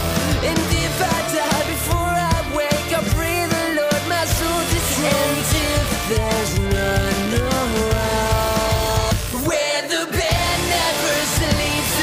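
From start to finish, a computer activity noise sits under the sound. It is a buzzing, chirping texture that pulses around seventy times a second. It stays roughly 20 dB below the wanted sound. It rises and shifts with the computer's workload, not with the audio. Processor, graphics or mouse activity draws changing current. That current disturbs the ground the audio circuit shares, and the disturbance leaks into the recording.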